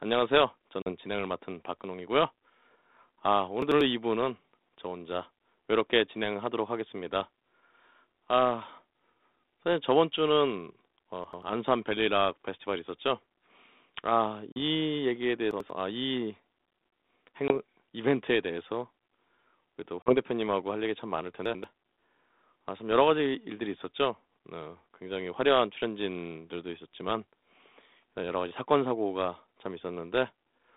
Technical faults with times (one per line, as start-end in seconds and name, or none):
0.82-0.91 packet loss on an ADPCM call
3.62-3.81 chunks out of order
11.24-11.42 chunks out of order
14.52-14.62 packet loss on an ADPCM call
15.51-15.70 chunks out of order
17.48-17.53 packet loss on an ADPCM call
20.02-20.16 packet loss on an ADPCM call
21.46-21.64 chunks out of order